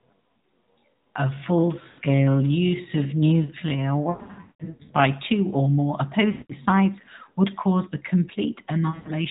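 From 0 to 5.04 s there is a time-stretched section. Software likely slowed the speech to about 0.6 times its pace while holding pitch, so the delivery drags.

Lost AMR speech frames follow. Frames that failed were concealed by repeating the last good settings at falling gain. This gives a brief drawn-out dip at 1.88 to 2.00 s and broken stretches scattered across 4.10 to 4.91 s, the longest gap 180 ms. A 180 ms fade comes at 6.32 to 6.52 s and a 140 ms break at 8.90 to 9.13 s, and the sound returns weak or rough after each.

Throughout, the AMR narrowband mobile codec removes everything above 4 kHz and adds a light buzz.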